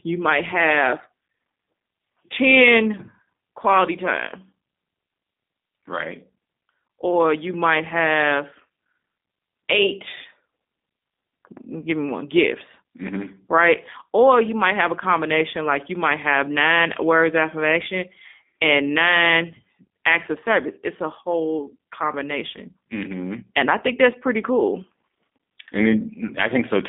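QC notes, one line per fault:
Throughout, G.729 codec: the speech has that rough, slightly synthetic edge you get when the codec rebuilds each 10 ms frame from a vocal-tract filter, a pitch predictor and a handful of pulses rather than the actual waveform. The line band runs about 200 Hz to 3.6 kHz with nothing above 3.7 kHz, so it's dull and boxy. The damage is plainly audible, and the sound fits an 8 kbit/s G.729A stream.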